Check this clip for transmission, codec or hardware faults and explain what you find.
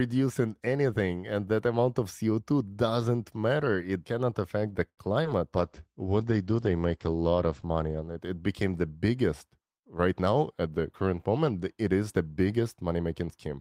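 Four transmission faults are audible, all in the middle of the speech between about 4.9 and 10.9 s.

From 4.89 to 5.00 s, just after "cannot affect the", a sound hangs on unnaturally for about 81 ms with a faint buzz or dip. This is a short stall from a late packet. The jitter buffer ran dry, so the receiver stretched the last sound until the packet arrived. Nothing is lost, but playback now runs 81 ms later.

At 5.24 to 5.26 s, still after "cannot affect the", there is a tiny smear or wobble. This is a short concealed packet loss. About 20 ms of audio never arrived in time, and the receiver extended the preceding sound to cover the gap before blending back into the real signal.

From 5.57 to 8.27 s the speech turns muffled and rough. This is a call bitrate drop. The encoder fell from 32 to 12 kbps, and for about 2.58 s at the lowest rate the audio bandwidth narrowed from 20 kHz to 8 kHz. 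That removes the upper frequencies and coarsens the coding.

From 10.12 to 10.86 s, between "became the biggest" and "current moment", the speech sounds hurried, about 111% speed, with no change in pitch. This is a jitter buffer speed-up. The receiver cut about a tenth of a second of short pitch-period slices to reduce excess buffered delay.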